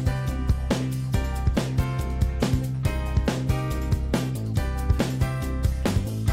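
Hard clipping appears from 4.90 to 5.23 s, where the peaks of the audio run into the ceiling of a stage that cannot pass anything larger and are sliced flat. The overdrive is about 0 dB, so the signal only just reaches that limit, and the flattening touches the tops of the loudest peaks rather than the whole waveform. The squared-off peaks add high harmonics, heard as a brief crackle on those peaks during that third of a second.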